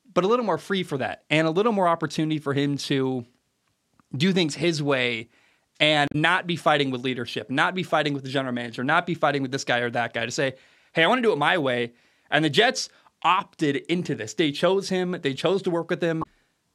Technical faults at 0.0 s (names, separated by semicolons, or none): none